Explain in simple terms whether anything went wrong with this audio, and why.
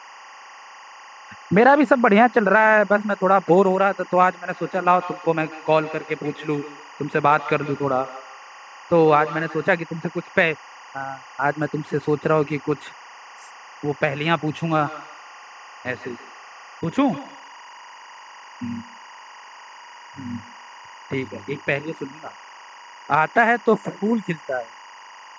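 Two things went wrong. Throughout the speech there is timecode bleed: a steady chirping warble that flips between pitches around 1 and 2 kHz, leaking in from a neighbouring timecode signal, which fits film-rate code. It never changes with the talking, which tells it apart from an echo.

From 4.5 to 9.77 s, and again from 14.63 to 21.28 s, there is feedback echo between two devices. One device replays what another device's microphone sent, and that microphone picks it up again. Each bit of speech comes back roughly every 150 ms, thinner and ringier. It only follows the talking, and it is weaker in the second stretch.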